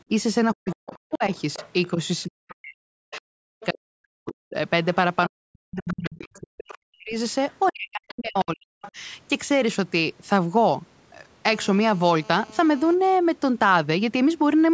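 This is a speech clip carried through call microphone processing, with nothing above 8 kHz. From 0.53 to 8.97 s the speech is turned down for roughly five seconds in total, by as much as about 40 dB, likely because of speech suppressed in double talk. It shows as gaps and sunken stretches in the waveform. The other side's voice leaks through at about 20 dB below the speech, at 0.68–3.66, 4.84–6.37 and 7.5–8.92 s, likely from incomplete echo cancellation. On a spectrogram it appears as a second, fainter set of harmonic traces. From 11.50 to 12.94 s a GSM phone buzz sits about 25 dB below the signal: a raspy 217 Hz tone whose harmonics form evenly spaced horizontal lines. From 13.01 to 13.86 s GSM signalling bursts follow at about 40 dB down, heard as even ticks with a longer buzz twice a second. They appear as thin vertical stripes.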